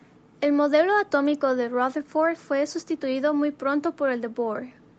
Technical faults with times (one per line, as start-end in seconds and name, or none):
none